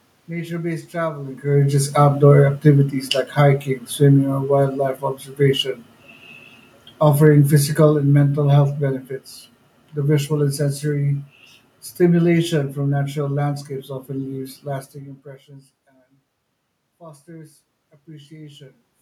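From 1.51 s to 4.89 s the speech and the room noise behind it sink together by about 6 dB, and again from 6.94 s to 9.01 s by about 5 dB. Both are automatic gain falling: the gain control judged the input too loud or its background noise too strong and pulled its gain down gradually, so the background drops with the voice. A talker changing distance around 1 s and 15 s alters only the voice.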